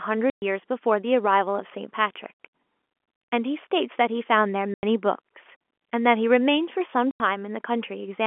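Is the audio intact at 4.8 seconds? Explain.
No. At 4.8 seconds the speech drops out completely. This is packet loss filled with silence, running from 4.74 to 4.83 s, a 90 ms hole. Some packets never reached the receiver, and it played pure silence in their place. The gap's length fits three lost 30 ms packets. The sound stops and restarts abruptly. The narrow telephone band of the G.711 line continues on either side of the gap.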